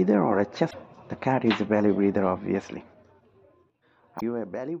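Damaged data in a compressed stream derails the decoder twice, at 0.67 to 0.74 s and 4.17 to 4.22 s, producing brief glitches as it loses sync and searches for the next frame header.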